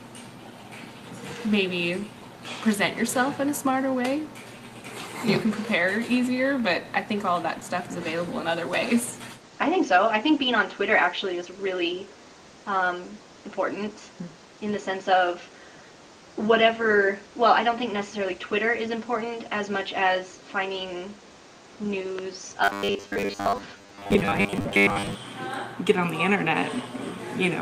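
At 7.59 to 7.63 s there is a short concealed packet loss: about 20 ms of audio never arrived in time, and the receiver filled that 20 ms gap by extending the sound just before it, then blended back into the real signal. It is heard as a brief smear or wobble. A spectrogram shows a thin vertical band where the texture briefly goes flat.

From 22.64 to 25.15 s the audio turns into a rigid, metallic buzz pitched at 100 Hz. This is robotic sound from repeated short buffers: new audio was likely arriving too slowly, so the playback kept repeating its last snippet while most of the real signal, roughly seven tenths, was skipped. A 100 Hz buzz fits a repeated chunk of about 10 ms. A waveform shows the same short shape recurring every 10 ms, and a spectrogram shows evenly spaced horizontal harmonics at multiples of 100 Hz across the whole section.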